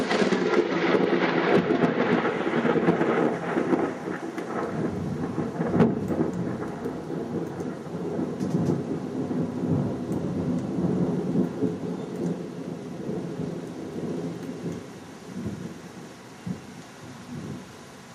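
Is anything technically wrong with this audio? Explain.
No, there is nothing technically wrong with this audio. Nothing in these sounds points to a problem with how they were captured or reproduced.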